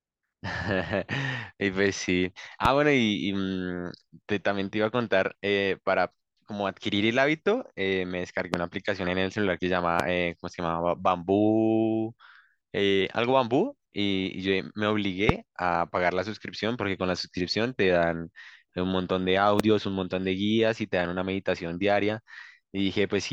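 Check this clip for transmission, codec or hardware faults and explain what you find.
Five loud pops sit on top of the speech, at 2.65–2.68 s, 8.54–8.56 s, 10.00–10.02 s, 15.29–15.32 s and 19.60–19.62 s. Each is a single sharp pop lasting about 20 ms. The first peaks roughly 15 dB above the speech and the rest around 20 dB, while the speech continues underneath. The likely cause is a brief electrical pulse, from a connector, switch, static or driver glitch, entering the signal chain and being shaped by the downstream circuitry. On a waveform each shows as a tall, narrow spike standing well clear of the speech envelope. On a spectrogram each is a thin bright vertical line spanning the full frequency range.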